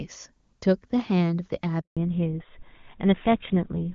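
At 1.81 s the speech cuts out for 160 ms, until 1.97 s. This is a handover gap. The call switched networks, and no speech frames arrived during the change. The sound fades within a few tens of milliseconds, and whatever was said in that span is lost.

From 1.97 s to the end, there is a fallback to narrowband. Before the gap, the sound is full and clear, which fits HD Voice at a high AMR-WB rate. Afterwards, everything above 4 kHz is gone. The voice turns duller and rougher, consistent with the older GSM full-rate codec.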